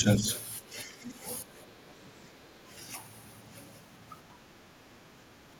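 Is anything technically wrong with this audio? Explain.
Yes. The speech dips and loses clarity from 0.0 to 0.26 s, 0.6 to 1.26 s, 1.42 to 1.91 s, 4.28 to 4.35 s and 5.25 to 5.34 s, by up to roughly 15 dB. This is likely speech suppressed in double talk, where the echo canceller muted the talker along with the echo.

From 0.26 to 0.41 s a faint second voice sits about 20 dB below the speech, likely the other side's voice leaking through after incomplete echo cancellation.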